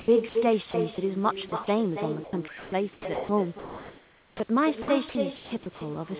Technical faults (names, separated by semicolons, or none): echo with no canceller; comfort noise in place of the background; sound dropped by the voice detector; sound chopped by the voice detector; onset clipped by the voice detector